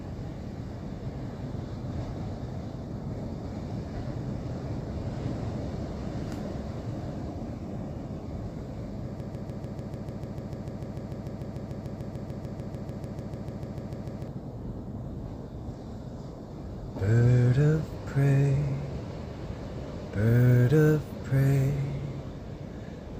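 From 9.2 to 14.3 s, a broken-record loop repeats one 148 ms fragment 34 times. Playback likely stalled, resending its last piece. The intended audio is lost.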